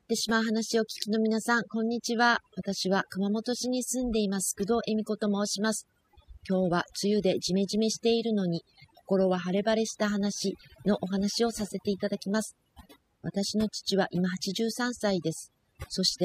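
Speech, with overdone noise removal running across the whole clip. The denoiser was pushed too hard, so it cuts individual frequency bands whenever they sit near its noise estimate, taking quieter bits of speech along with the noise and leaving the background as twinkling, warbling specks.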